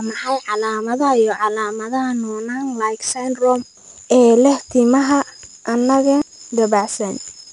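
Throughout, 4-bit ADPCM compression codes each sample as a coarse step, adding gritty hiss on loud syllables. Spectrograms show level-following broadband noise and nothing above 10.7 kHz.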